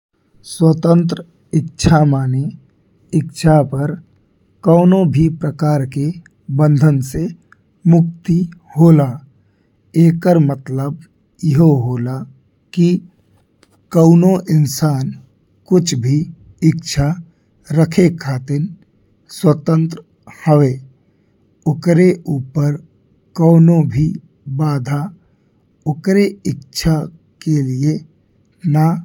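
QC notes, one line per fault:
No faults heard in this speech clip.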